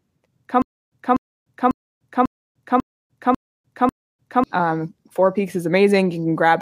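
From 0.62 to 4.44 s there's a stutter with silent gaps: a 247 ms burst repeats seven times with 298 ms of dead silence between. The player likely stalled and kept replaying the last fragment.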